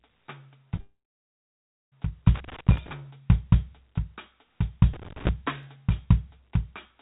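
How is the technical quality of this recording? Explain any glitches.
The recording has several clear glitches: an early gap in the music, two bursts of crackle, and two isolated clicks. The music is heard through a narrow telephone-style channel with nothing above 4 kHz, which points to G.711 A-law at 64 kbps.

At 0.76 to 0.80 s there is a short concealed packet loss. About 20 ms of audio did not arrive in time, and the receiver bridged the hole by extending the last sound for roughly 22 ms before blending back into the real signal. It is heard as a brief smear or wobble in the music. Unlike the longer gap that follows, it is over almost at once.

From 0.80 to 1.94 s the sound falls away for over a second, most likely a long network dropout. The receiver keeps extending the previous sound as a fading buzz at first. For about 0.96 s of this stretch only silence is left, and the music then resumes further along, with about 1.1 s of it lost. 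The clearest sign that separates this from the short loss is the length of that silence.

Loose connector crackle appears at 2.35 to 2.93 s and again at 4.93 to 5.29 s. A contact making and breaking rapidly chops the signal, which gives an irregular, scratchy burst of crackle lasting a few tenths of a second. The crackle is spread over time and ragged, and that separates it from the single clean clicks.

Single sharp clicks at 2.78 s, inside the first crackle burst, and at 5.63 s are likely dropped samples. A tiny fraction of a millisecond of the waveform is missing, so the signal jumps straight to a later value. Nothing audible is removed, and only one instantaneous tick is heard. Unlike the crackle it does not form a burst, and unlike concealed packet loss it has no smeared fill.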